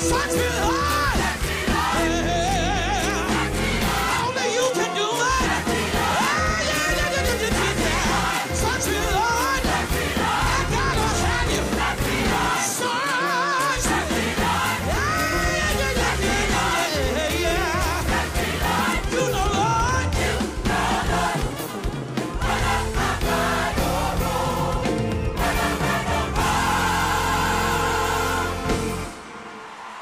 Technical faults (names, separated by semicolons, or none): none